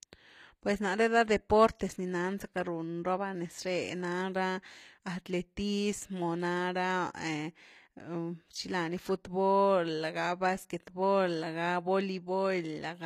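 Throughout the speech, the treble above the core band sounds synthetic: s sounds turn gritty and metallic, with nothing above about 14.9 kHz. This likely comes from HE-AAC compression at a low bitrate near 24 kbps, where spectral band replication rebuilds the upper range from copied lower bands.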